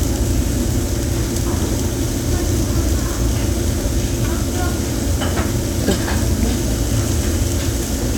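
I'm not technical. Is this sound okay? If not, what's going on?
Yes, nothing wrong can be heard in this sound.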